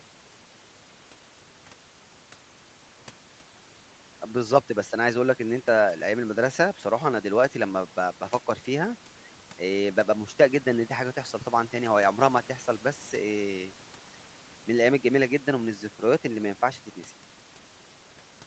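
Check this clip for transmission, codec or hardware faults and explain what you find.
No transmission, codec or hardware faults turn up in this speech recording. It has the sound of call microphone processing, with the lowest bass trimmed by its high-pass filter and nothing above 8 kHz, which is normal for that path.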